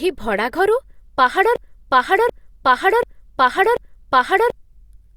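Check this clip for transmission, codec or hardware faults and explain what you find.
One fault is present, a broken-record loop. From 1.56 s to 4.55 s, a 0.74 s fragment of speech plays four times back to back, identical each pass, and the speech that belonged there is gone. The stream likely stalled and kept resending its last held piece. Unlike an echo, nothing fades or overlaps: every repeat is a full-level, exact copy.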